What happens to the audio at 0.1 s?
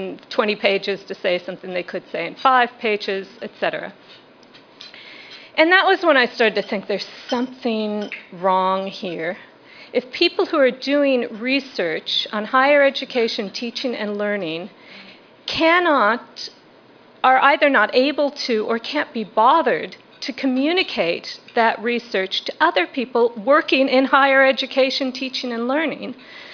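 Nothing goes wrong at 0.1 s; the audio there is intact, with no dropout, click, glitch or other fault.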